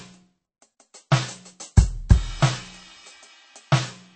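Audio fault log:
throughout MP3 compression: an encoder short of bits, likely MP3 at a rate near 34 kbps, removed everything above 8.4 kHz and let weak frequency lines drop in and out between frames. The music sounds dull at the top, with plainly audible watery swirl.
1.11 s pre-echo: the codec spread its quantisation noise across the whole block containing a sharp attack. Noise scaled for the loud hit fills the quiet just before it, giving about 10 ms of hiss ahead of a softened, smeared onset.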